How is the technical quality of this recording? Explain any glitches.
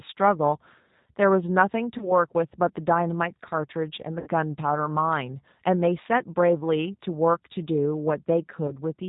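Quality is limited by low-bitrate telephone coding, with three brief glitches. Throughout, the speech sounds band-limited, slightly rough and synthetic: G.729 coding at 8 kbit/s, rebuilding speech from a model and discarding everything above 4 kHz.

At 1.98–2.12 s, 4.20–4.28 s and 8.67–8.72 s the sound is briefly stretched into a buzzy tone or coloured noise that fades, then recovers weakly. This is VoIP packet loss concealed by the speech codec. The decoder stretched its last frame over 20 ms, 60 ms and 20 ms gaps, which fits one, three and one lost packets.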